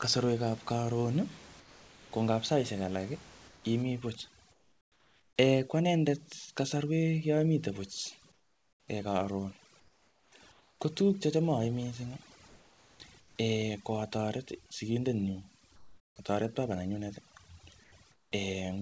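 Speech over a call path with an 8 kHz top end. From 1.60 to 2.12 s the sound drops out into steady noise, likely the voice detector cutting real speech as background. At 3.48, 4.52, 8.32, 9.80, 12.48, 15.76 and 17.84 s the room background turns to flat comfort noise, up to about 14 dB quieter. From 3.82 s to the end, overdone noise removal leaves twinkly near-silence between phrases.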